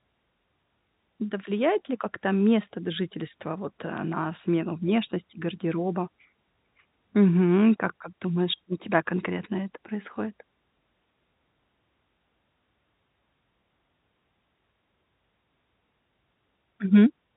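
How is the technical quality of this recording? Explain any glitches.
The technical quality holds up, with no glitches to explain in this speech recording.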